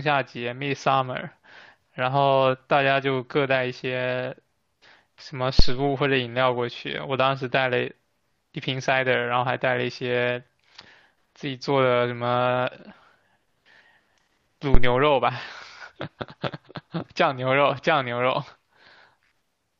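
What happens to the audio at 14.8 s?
At 14.75 s a phantom power thump cuts in and rings out by about 14.97 s: a deep low thud peaking near -3 dBFS and dying away within about 50 ms. The supply switched on or off on a live input, and that step punched through the coupling capacitors.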